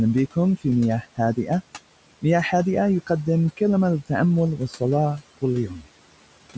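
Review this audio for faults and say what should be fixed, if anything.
A video or display buzz runs throughout at the 75 Hz field rate, well below the speech. It is a screen or video cable coupling into the audio, with hash above the fundamental that mains hum lacks. Noise suppressor artifacts are also present throughout. The suppressor pulls steady noise down by about 18 dB between phrases and lets it rise under speech. That pumping separates it from the room noise, which stays steady and sits about 19 dB below the speech. Speech cut by the noise suppressor occurs at 4.57–4.82 s and 5.68–5.87 s, dropping by about 10 dB and about 13 dB for roughly 150 ms each. Here the speech itself is swallowed, while in the general artifacts only the background moves. To fix these, reroute or shield the audio away from the display cabling, and lower the suppressor's strength so quiet speech stays out of its noise estimate.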